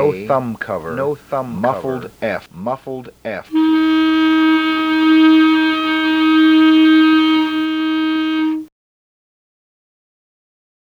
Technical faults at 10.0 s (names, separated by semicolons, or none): doubled audio track